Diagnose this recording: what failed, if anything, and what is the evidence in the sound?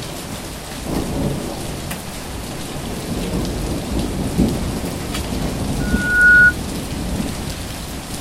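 Loudspeaker feedback squeal in the acoustic path: a 1.5 kHz tone swells over about half a second from 5.79 s to 6.54 s, reaching roughly 15 dB above the signal, as the microphone-to-speaker loop gain exceeds unity.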